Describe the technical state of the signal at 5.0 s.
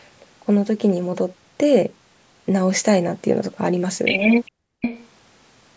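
A copy of the speech about 5 dB quieter returns 409 ms late from 4.81 to 5.08 s: an echo leak, likely from a speakerphone's echo canceller letting pickup through.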